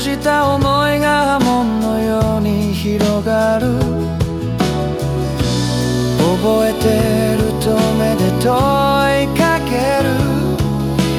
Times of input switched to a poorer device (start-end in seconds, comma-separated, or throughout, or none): none